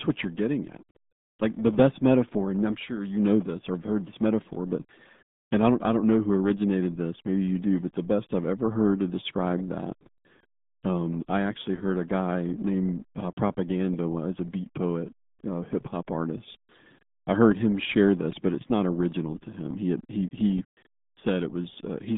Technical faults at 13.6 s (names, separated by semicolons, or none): RealAudio 14.4 codec